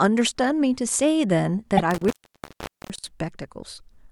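At 1.77 to 1.80 s a single compressed frame was delivered twice, so the decoder played the same 24 ms block of speech a second time. This repeated frames fault adds 24 ms to the clip. It is heard as a brief stutter, a tiny doubled fragment.

From 1.91 s to 3.10 s the signal path itself breaks, which points to an intermittent contact, a loose plug or cable connection that lets go and reconnects. The line is open for about 793 ms in total, and during that time the speech drops out, leaving only faint hiss. Crackle marks the edges, a burst of scratchy noise as the contact breaks and again as it makes connection once more.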